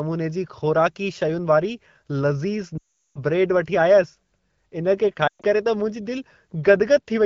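Speech carried over an AMR-WB (HD Voice) link, with lost AMR speech frames at 2.77 to 3.19 s and 5.27 to 5.46 s. The decoder repeats its last good parameters at falling gain, so the sound drops to near silence within two frames; the second, patchier gap fits a few scattered frames.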